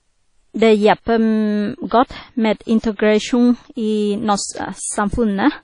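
Throughout the speech, nothing is heard above 10.1 kHz. The top end sounds dull and closed off. A watery, ringing wash clings to the sound, and a hiss rises and falls with it. The damage is plainly audible. This is likely WMA compression at a low bitrate, which fits roughly 32 kbps. The transform encoder spreads its rounding noise over long blocks, and it drops quiet detail entirely.

From 2.95 to 2.99 s there is pre-echo. A short hiss of about 37 ms comes just before a sharp attack. The attack itself sounds soft and smeared, not crisp. The codec spreads its noise evenly across a whole block. Here the attack fell late in that block. The noise sized for the loud onset therefore leaked into the quiet moment before it.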